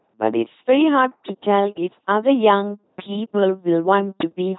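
From start to finish, the speech has been through an LPC-10 vocoder, and it's heavily mangled. Instead of the real voice, a simple filter model gets driven by either a buzzy pulse train or noise, with each moment forced to be fully voiced or fully unvoiced. That's where the flat, buzzing robot quality comes from, plus stray buzz or hiss where that call goes wrong. Nothing above about 3.9 kHz survives, which fits the 2.4 kbit/s rate.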